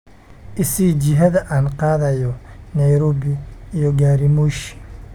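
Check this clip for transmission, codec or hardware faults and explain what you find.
No faults turn up when this clip is checked.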